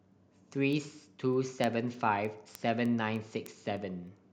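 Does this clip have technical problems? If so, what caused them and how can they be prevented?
Yes: word clock ticks recur about every 0.3 s from 0.12 to 4.07 s, as a digital link slips one sample each time between unlocked clocks around 70 ppm apart. Locking the receiver to the sender's clock, or sample-rate converting, prevents this.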